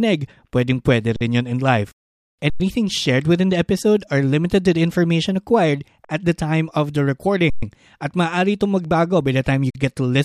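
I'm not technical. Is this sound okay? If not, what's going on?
No. An underrun with held sample happens five times, at 1.16, 2.50, 6.05, 7.50 and 9.70 seconds, freezing the speech for between about 46 and 126 ms each time. The one at 2.50 s comes right after "rin yon in life". The player briefly ran out of audio to send and held its last value, so the sound stops flat without a loud click. Nothing is skipped: the speech resumes where it stopped, which sounds like a brief stutter.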